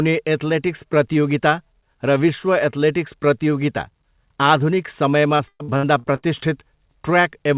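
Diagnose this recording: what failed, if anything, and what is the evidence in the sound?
Network-stage repeated packet loss (robotic sound) hits the speech from 5.36 to 6.25 s. Six gaps, the longest 117 ms, leave 43% patched by repeating prior sound.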